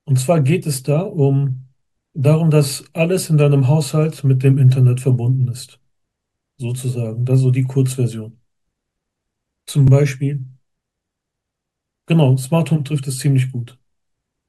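Overlapping chunks: the audio was handled in blocks of about 4 s, and one block began before the previous one had finished, so from 9.88 to 9.92 s a 44 ms stretch of speech plays twice, heard as a brief click or stutter at that join.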